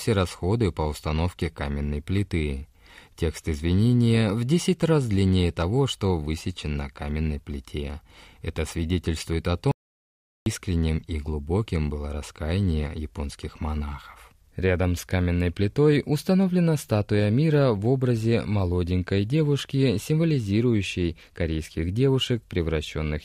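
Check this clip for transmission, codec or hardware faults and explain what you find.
One fault is present in this speech clip: an audio dropout to silence from 9.71 to 10.46 s, just after "свидетельствует о". About 0.75 s of speech vanishes into silence, likely because the input link or device briefly failed while recording continued. Unlike a natural pause, no room tone survives; the sound stops dead and resumes abruptly.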